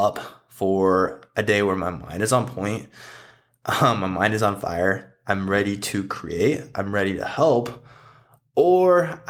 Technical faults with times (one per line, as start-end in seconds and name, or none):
none